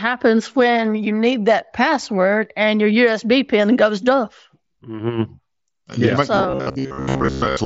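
At 5.79 s a buzzy hold lasts about 23 ms, then a slight warble as the sound picks up again at 5.81 s. This is concealed Bluetooth headset packet loss. The link between headset and phone dropped a short run of voice packets, which fits about three lost frames. The receiver covered the gap by repeating the best-matching recent stretch of waveform, so the hole is filled at full level instead of going silent.

From 6.36 s to the end of the clip the speech turns into a rigid, metallic buzz pitched at 66.7 Hz, still loosely tracking the speech underneath. This robotic sound most likely comes from repeated short buffers. Fresh audio arrived too rarely, so the playback side looped its last chunk of about 15 ms, whose length sets that 66.7 Hz pitch. Meanwhile roughly 70 percent of the real audio was skipped. The mSBC wideband headset codec carrying all of this adds only a light graininess.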